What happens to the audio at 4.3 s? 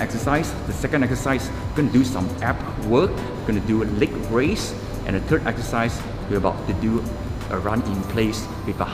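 Computer activity noise is present at 4.3 s, as it is across the whole clip rather than starting there. Shifting load in the host computer disturbs the ground shared with the audio circuit, so that activity leaks into the signal as a thin, buzzing chirp pulsing at around a kilohertz. It sits roughly 35 dB below the sound, faint but audible, and its rise and fall follow the machine's workload, not the audio itself.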